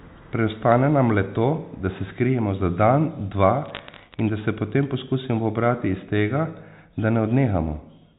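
From 3.66 to 4.2 s the speech picks up bit errors on a digital phone line: a scatter of sharp ticks and crackle laid over otherwise unchanged speech, which fits an error rate of roughly a few tenths of a percent. Each flipped bit corrupts a single sample of the G.711 mu-law stream. A hit on the sign or a high-order bit throws that sample far off. On the waveform these are isolated one-sample spikes. On a spectrogram they are thin vertical lines running up to the 4 kHz ceiling of the telephone band.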